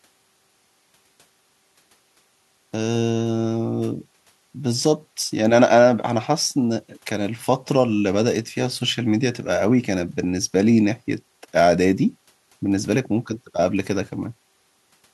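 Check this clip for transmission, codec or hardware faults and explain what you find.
No faults can be heard anywhere in this speech recording. There is no moment in it that calls for an explanation.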